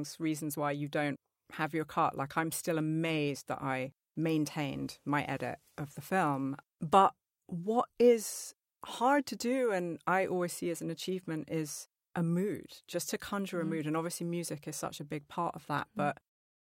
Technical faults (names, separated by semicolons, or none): none